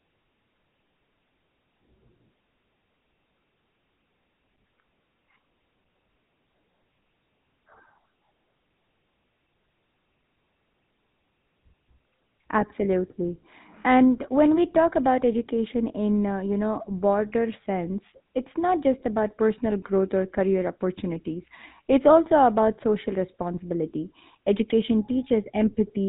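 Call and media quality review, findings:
GSM full-rate codec, whole clip. Buzzy, gravelly roughness on the speech throughout, plainly audible. Band-limited, nothing above 4 kHz. Probable component: narrowband GSM full-rate speech path, sound consistent with a 13 kbps coder. Mechanism: vocal tract modelled by a filter, excitation reduced to regularly spaced pulses keeping every third sample. Missing fine excitation detail heard as buzz. Top end cut by narrowband sampling.

GSM bit errors, 14.71 to 14.79 s. Brief squawk and gargle in the speech, about 80 ms long. Level and tone jump abruptly, then recover. Probable component: radio link feeding the GSM speech decoder. Mechanism: corrupted bits reached the decoder. Bad filter, pitch or gain values distorted the spectrum and level of each hit frame. Duration fits roughly four 20 ms frames damaged in a row.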